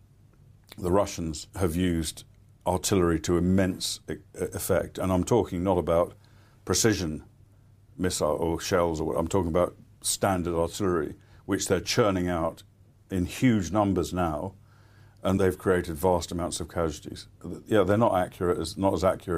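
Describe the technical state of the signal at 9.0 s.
Nothing is wrong with the signal at 9.0 s; the speech passes through intact at that moment.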